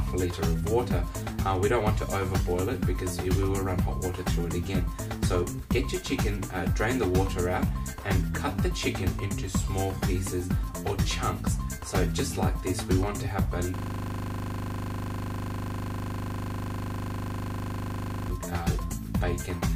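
A system hang loop runs from 13.76 s to 18.30 s. For about four and a half seconds the audio stops moving forward and a single 40 ms fragment repeats exactly, over a hundred times, cycling at 25 Hz. This happens when the computer or its audio driver freezes while the sound hardware keeps replaying the last contents of its ring buffer. The 40 ms loop suggests a buffer of that length.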